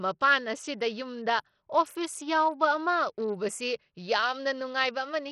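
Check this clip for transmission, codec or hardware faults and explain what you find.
There's one codec fault running through the whole speech clip: likely Bluetooth SBC compression at a low bitrate, which fits around 64 kbps. Starved high sub-bands leave nothing above 16.7 kHz, with gritty, heavily quantised texture throughout.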